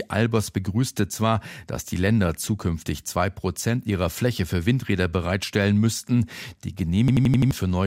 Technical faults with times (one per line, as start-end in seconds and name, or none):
7.08-7.51 system hang loop